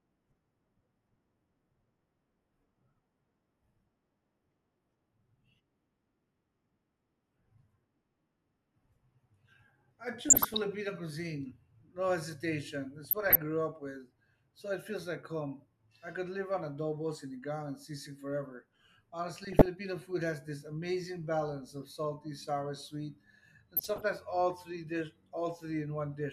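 DAB burbling hits at 10.20–10.64 s, 13.04–13.38 s, 19.43–19.66 s and 23.76–24.05 s. Uncorrected bit errors put short blips of noise into single sub-bands and make sub-bands jump in level, over the speech.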